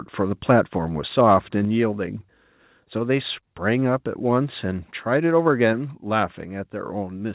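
A speech recording in which the level drops abruptly three times, by about 4 dB at 1.65 s, about 1 dB at 4.71 s and about 3 dB at 5.73 s. The voice and background fall together with no fade, as if a fader had been nudged down in one click. The likely cause is a microphone volume step-down, where call software judged the input too hot and lowered the device gain in a single step. The sound carries nothing above 4 kHz, which fits a G.711 call path.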